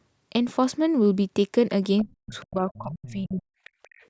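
At 1.98 s a faint second voice creeps in under the speech, about 20 dB down, and it's back at 2.34 to 2.45 s, 2.73 to 3.12 s (the loudest, only about 15 dB below), and 3.64 to 4.07 s, with the 2.34 s and 3.64 s stretches at roughly 30 dB down. That's the other side's voice leaking through, most likely the far end playing on a loudspeaker with the echo canceller not scrubbing it all out of the mic, so it comes through.

Overlapping that, from 2.01 to 3.56 s, the main talker keeps ducking and chopping for about a second in total, dropping by something like 40 dB at its worst. That's speech suppressed in double talk. With both sides going at once, the canceller likely couldn't tell its own talker from the echo and just pulled everything down. The talker sits under the usual call-mic band limit, with nothing above 8 kHz.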